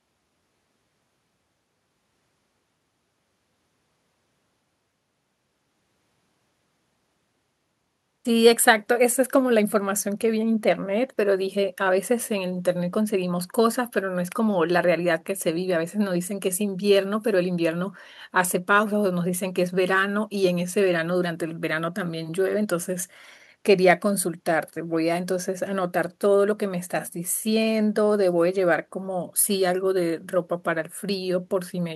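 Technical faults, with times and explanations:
No technical faults are present in this speech recording.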